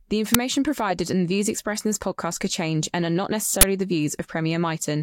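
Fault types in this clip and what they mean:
Uninitialised buffer: a block of audio memory was sent to the output before any speech was written into it, so whatever values were left there played as sound. Each event is a sudden, loud crack or burst of digital noise filling exactly one block, about 5 ms at 0.34 s and about 20 ms from 3.61 to 3.63 s. A dropout leaves silence and a click is a single instant, but this is a loud noise burst lasting a whole block.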